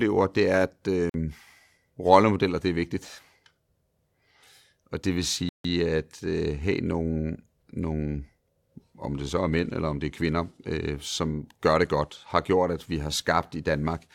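At 1.09 s the speech drops to silence for about 46 ms, then resumes at 1.14 s; a longer gap follows from 5.49 s to 5.64 s, lasting about 155 ms. Both are likely Bluetooth stalls, where interference delayed packets and the headphones' buffer emptied before resends arrived. On a waveform each appears as a flat line cutting abruptly through the signal; a spectrogram shows a clean vertical gap across all frequencies.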